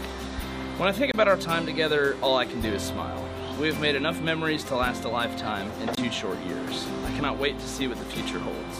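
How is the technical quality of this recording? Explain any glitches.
The recording has two dropouts, both a block of digital silence. The first runs from 1.12 to 1.14 s, the second from 5.95 to 5.97 s. In each case the output buffer was likely not filled in time, so roughly 23 ms of zeros went out. That length fits one missed 1024-sample buffer. The sound cuts straight to silence and back with no fade, leaving a brief hole.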